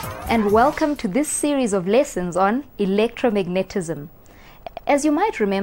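A short stutter at 4.66 to 4.87 s, where a 104.5 ms block replays twice: repeated frames, the same compressed block decoded again, adding 209 ms.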